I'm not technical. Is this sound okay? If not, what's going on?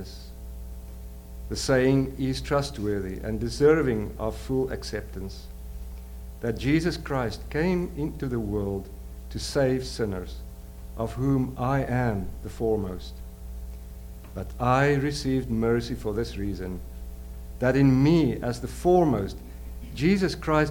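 No. Mains hum runs from start to end: a steady low buzz at 60 Hz, fairly prominent under the sound. Electricity from the power supply is leaking into the recording, typically through a ground loop between connected devices or a nearby transformer.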